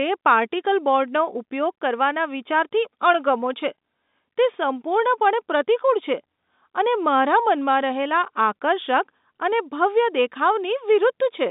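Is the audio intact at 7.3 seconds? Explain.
Yes, the speech is intact at 7.3 seconds, with nothing there beyond the narrow telephone band of the G.711 line it passed through.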